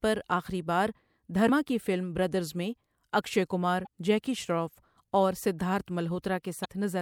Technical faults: damaged data in a compressed stream

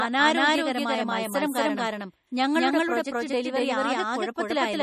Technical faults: doubled audio track; MP3 compression

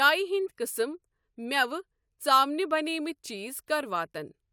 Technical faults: none

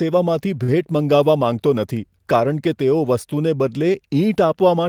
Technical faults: short stall from a late packet

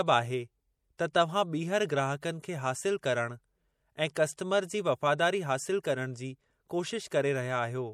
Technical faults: MP3 compression

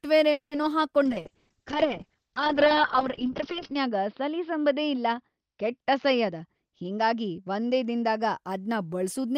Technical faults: call audio freeze; short concealed packet loss; call bitrate drop; jitter buffer speed-up

